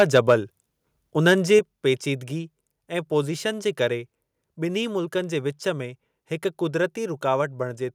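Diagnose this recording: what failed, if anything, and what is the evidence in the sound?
Microphone overload, likely at the converter stage: from 0.00 to 0.34 s the loudest parts carry a harsh, crackling edge, and again briefly at 1.55 to 1.57 s. The input was driven roughly 4 dB past full scale at the start and about 1 dB at the second spot, so the waveform tops were flattened on a small share of samples. Flat-topped clipping differs from codec distortion because it sits only on the peaks, not spread across quiet passages.

The microphone volume stepped down at 1.59 s, just before "पेचीदिगी ऐं पोज़ीशन जे". The level drops abruptly by about 5 dB and stays there, pulling the background down with the speech. This is likely the call processing reacting to the clipped peak a moment earlier by lowering the device input gain in a single move. A gradual automatic gain ride would ease the level down over time. 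This is one sudden step.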